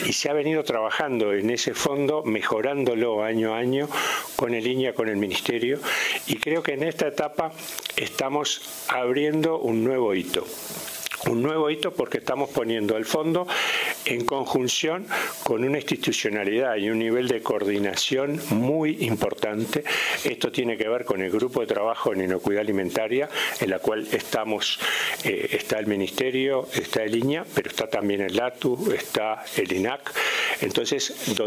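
No technical faults can be heard anywhere in the clip. Nothing in the audio calls for a timestamp or further comment.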